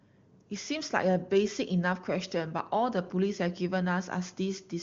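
Nothing stood out on listening to this speech, which comes through the AMR wideband (HD Voice) codec at its highest rate of 23.85 kbit/s.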